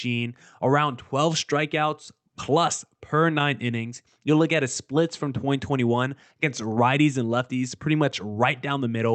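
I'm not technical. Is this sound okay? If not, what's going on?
Yes, this sound is okay, with nothing going wrong in it; it simply has the ordinary sound of audio sent over an internet call.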